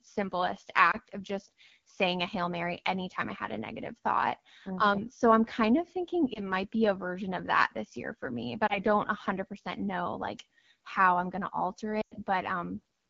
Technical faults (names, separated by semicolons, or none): AMR wideband (HD Voice) codec; lost AMR speech frames